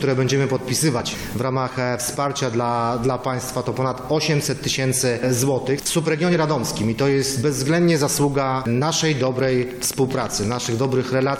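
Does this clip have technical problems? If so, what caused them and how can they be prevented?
Yes: a train of clicks runs from 9.01 to 11.37 s. About thirty same-shaped ticks arrive unevenly at roughly 11 per second, peaking a few dB above the sound. Their matching shape sets them apart from random crackle. The likely cause is interference from nearby equipment or a faulty connection or power supply. Shielding cables, moving away from noisy devices and using a stable interface would prevent it.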